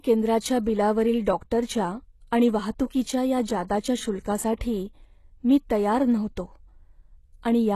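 A speech clip with plainly audible HE-AAC compression damage throughout. Nothing gets above 12.3 kHz, and the s sounds come out gritty and metallic because the treble is rebuilt from copied lower bands whose harmonics don't line up, likely from a rate around 16 kbps.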